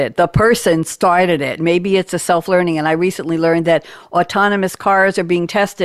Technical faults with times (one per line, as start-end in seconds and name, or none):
none